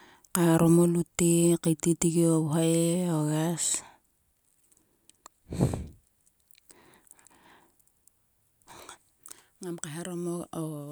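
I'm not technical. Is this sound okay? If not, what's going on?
Yes, this sound is okay. Listening to it, there's no technical problem to point out.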